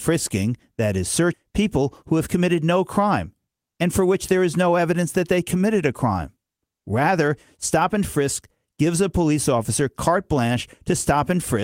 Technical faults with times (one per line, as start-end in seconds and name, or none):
1.33-1.35 skip ahead
1.43-2.80 jitter buffer speed-up